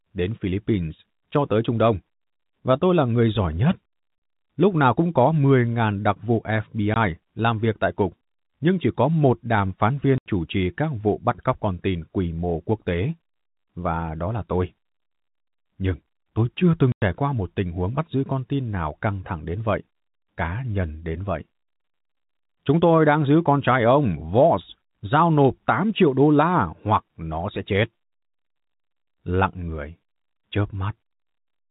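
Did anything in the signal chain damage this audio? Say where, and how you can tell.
Yes. The damage is in the network stage: packet loss filled with silence. The speech drops to dead silence at 4.18–4.22 s, 6.94–6.96 s, 10.18–10.26 s and 16.92–17.02 s, gaps of 40, 20, 80 and 100 ms, each with hard edges. Every gap is a whole multiple of 20 ms, which points to 20 ms packets that never arrived. The receiver played silence instead of concealing them, across the telephone-band G.711 stream.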